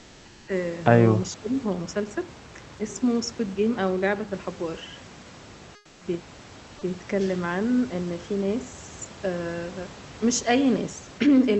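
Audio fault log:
0.00–0.47 s and 5.75–6.01 s: comfort noise in place of the background. The room sound becomes a steady, featureless hiss, about 4 dB and then about 6 dB quieter, likely from Opus discontinuous transmission. Unlike a noise gate, there is no true silence.
1.26–1.54 s: speech suppressed in double talk. The voice is pulled down by roughly 20 dB while both sides overlap, likely from the echo canceller turning the talker down. Unlike a packet dropout, it dips rather than cutting off abruptly.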